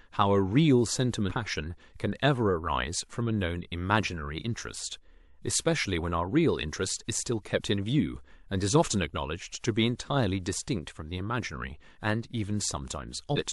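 At 1.28–1.32 s and again at 13.35–13.39 s the speech jumps forward, from compressed frames skipped. Roughly 300 ms and then 200 ms of audio go missing, which fits several 46.4 ms frames.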